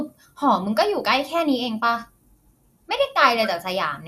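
From start to finish, the speech sounds dull and gurgling, with a grainy roughness under every phrase. Nothing reaches above about 14.4 kHz. The likely cause is MP2 compression at a low rate, something like 80 kbps. That coder splits the sound into sub-bands and shares out a tight bit budget. The top bands get switched off, and the remaining ones are quantised coarsely, so the damage is plainly audible.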